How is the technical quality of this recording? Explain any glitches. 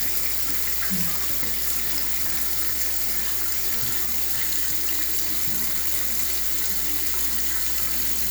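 The recording is marred by one fault that runs the whole way through. Mains hum at 60 Hz, roughly 20 dB below the sound, comes from power-line coupling. It is a steady pitched drone with low harmonics, unlike broadband, fluctuating rumble.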